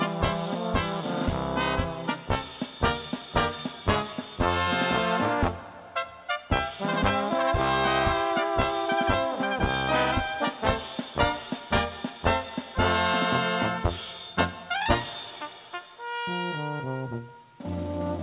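No technical faults are audible in this recording.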